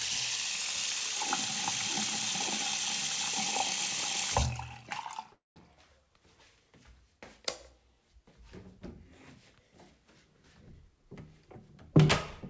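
A call audio freeze runs from 5.33 to 5.59 s. The everyday sound stalls, and its last instant is drawn out into a short buzz or hiss that fades, followed by about 170 ms of silence. Playback then picks up exactly where it stopped, nothing lost, but now running 230 ms late. The likely cause is packets held up in transit, leaving the jitter buffer empty, on a G.722 path that carries nothing above 8 kHz.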